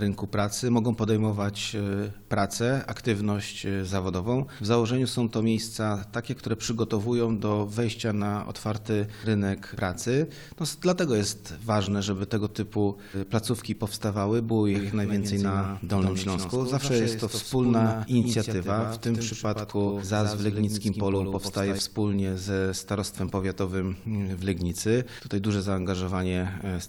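A doubled audio track runs from 14.75 to 21.79 s: a second full-band copy of the sound trails the original by roughly a tenth of a second, around 5 dB quieter, with no decay or room colour. It cuts in and out abruptly, likely from a slower capture path or misaligned edit.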